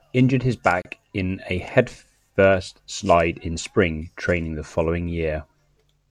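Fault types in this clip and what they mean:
Gap at a join of encoded pieces: the speech was encoded in separate pieces that were joined without trimming the encoder's start-up delay and end padding, so that extra silence stays in the stream. At about 0.82 s a hole of roughly 31 ms opens in the continuous speech, its edges smeared by the codec, and the speech then resumes exactly where it stopped. The join spacing points to pieces about 6 s long.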